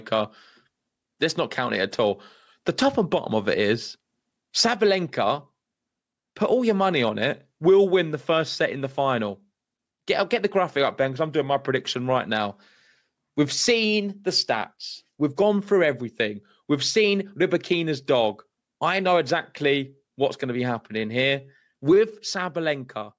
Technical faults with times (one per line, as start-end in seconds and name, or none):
0.00-23.18 gain pumping